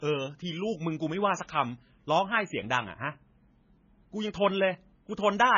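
Throughout, the speech sounds watery and swirly with nothing above 7 kHz, likely heavy MP3 compression starved of bits, which fits roughly 17 kbps.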